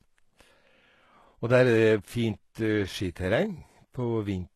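HE-AAC compression, throughout the clip: the speech has plainly audible codec damage, with nothing above 12.3 kHz and treble that sounds rebuilt rather than captured. The cause is likely spectral band replication copying lower bands upward, which fits a bitrate around 16 kbps, leaving s sounds gritty and lispy.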